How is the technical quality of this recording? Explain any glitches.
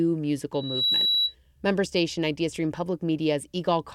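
There's one real problem here: a loudspeaker feedback squeal from 0.54 to 1.35 s. A mic is catching the speaker it feeds, and at 3.9 kHz the loop gain tops one, so a pure whistle swells over roughly a third of a second until it sits about 5 dB above the audio.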